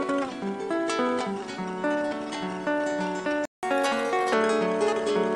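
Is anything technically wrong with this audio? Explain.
Yes, there are two related faults.

From 3.45 to 3.63 s there is a playback stall: the audio cuts out for about 176 ms and then resumes. The likely cause is the player running short of data or having its output thread held up, so nothing reached the output until it recovered. On a waveform this is a flat line between two active stretches. A spectrogram shows a blank vertical band cutting across all frequencies.

From 3.63 to 4.33 s the player does a catch-up at higher speed, resampling the buffered backlog to run 1.25 times faster so it can regain the time lost in the stall. Speed and pitch rise together, by around four semitones, and the sound turns briefly hurried and chipmunk-like before returning to normal. On a spectrogram the harmonics and other features shift upward and are squeezed closer together in time. The waveform shows the same shapes compressed horizontally for that stretch.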